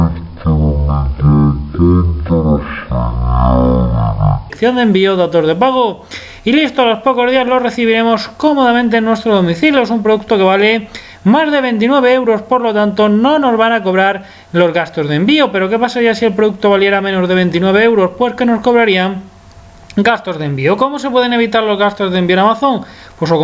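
For the first 4.5 seconds the audio drags at a third of its proper speed and sits about 19 semitones low, so everything sounds sluggish, thick and deeply lowered, just over an octave and a half below where it belongs. This is a wrong sample rate fault: the samples are being clocked out far slower than they were captured, with no rate conversion, so pitch and tempo fall together. The one-third ratio fits 48 kHz material played back at 16 kHz.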